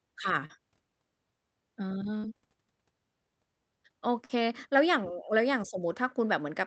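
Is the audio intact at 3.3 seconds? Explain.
Yes, the speech at 3.3 seconds is intact, with nothing interrupting or distorting it at that moment beyond the ordinary character of the call codec it passed through.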